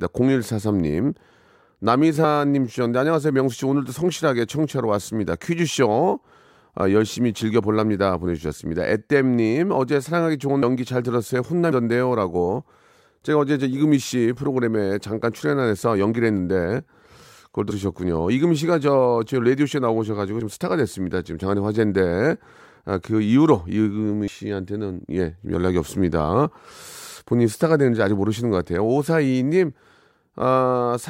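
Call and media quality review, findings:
Compressed frames skipped, speech track: short smeared blips where the audio jumps ahead at 2.23 s, 10.61 s, 11.71 s, 17.70–17.72 s and 24.27 s. Decoder dropping whole frames, either missing or rejected as corrupt. Jumps are multiples of a roughly 23.2 ms frame, which points to 1024-sample frames at 44.1 kHz. About 50 ms lost at 2.23 s, about 150 ms at 10.61 s, about 100 ms at the others. Overlapping frames blur the joins, so no hard clicks.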